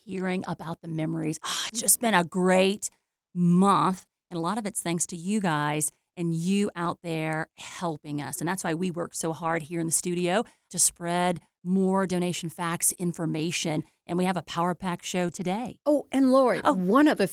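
Short concealed packet loss first appears at 1.67 to 1.71 s. About 20 ms of audio never arrived, so the decoder stretched the preceding sound across the hole and crossfaded back. The result is a brief smear or wobble rather than a rough patch. It overlaps a lost packet rebuilt from error correction at 1.69 to 1.71 s, where a low-bitrate backup copy carried in the next packet fills in without a gap but sounds grainier and noisier.

More rebuilt stretches follow at 3.97 to 4.03 s, then 6.85 s, and 9.43 to 9.57 s, where the longer roughness fits several separate lost packets. Concealment smears return at 4.05 to 4.09 s and 12.93 to 12.97 s, the latter just after a rebuilt packet at 12.89 to 12.91 s. The longest rebuilt stretch runs from 15.27 to 15.45 s. Throughout, the concealed losses sound like a held, wobbling continuation of the previous sound, while the rebuilt ones keep the real content going, only coarser.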